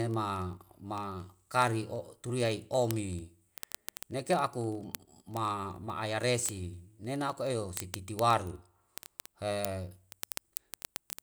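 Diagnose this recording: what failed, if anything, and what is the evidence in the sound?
A clocking failure on a digital link produced word clock ticks. Sharp ticks run through the speech from 0.11 s to 11.21 s at a steady rate of roughly one every 30 ms, several hundred in all. The receiving device ran on its own clock, not locked to the sender. The two clocks differed by something near 700 parts per million. Each time they slipped past each other, one sample was dropped or repeated, leaving a tick.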